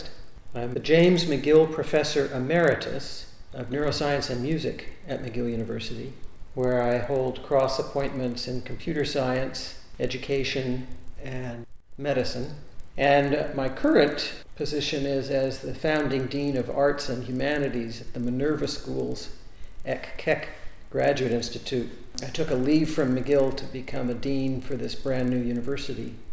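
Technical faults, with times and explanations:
throughout, resampler restarted on every block: a buzz of regular ticks at 25 Hz rides on the audio, present only while there is signal. Each 40 ms block was converted separately, which fits 44.1 kHz down to 16 kHz, leaving a small error at every block edge.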